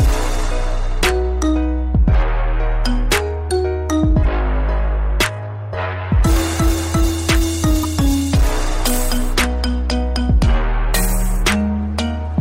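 Damaged data in a compressed stream twice corrupts the encoded frames, so the decoder misreads them and loses sync until it finds the next valid frame header. Each event is a brief chirp or blip in the audio, at 4.23 to 4.25 s and again at 7.83 to 7.85 s.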